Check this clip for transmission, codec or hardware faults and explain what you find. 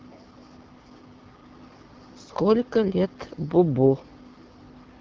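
One fault runs through the whole clip: AMR wideband (HD Voice) codec damage. The speech was coded with a low-rate wideband voice model, and the plainly audible rough, raspy texture fits the 8.85 kbit/s mode. Nothing sounds above about 7.5 kHz, and the top band holds shaped noise rather than real detail.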